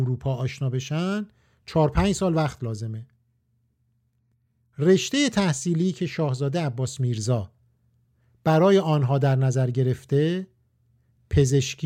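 No technical faults are audible.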